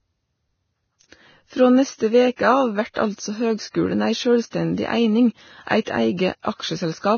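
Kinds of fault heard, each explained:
Vorbis compression: the speech was likely encoded at a very low bitrate, around 18 kbps, so the treble was quantised so coarsely that its detail became matched noise. Consonants sound hissy and grainy, attacks blur, and nothing remains above about 6.6 kHz.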